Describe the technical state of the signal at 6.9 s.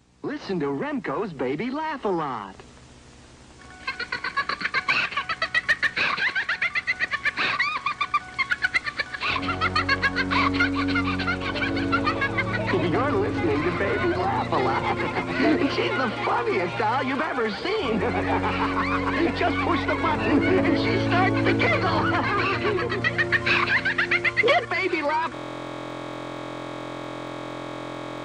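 At 6.9 s the signal is intact, with no audible fault at that moment.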